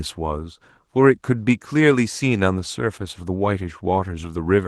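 Opus voice compression runs throughout this speech, plainly audible. The sound points to a low bitrate, around 16 kbps, in hybrid mode: linear prediction codes the band below 8 kHz coarsely, leaving the speech hoarse and slightly robotic, while a thin upper layer keeps some top end.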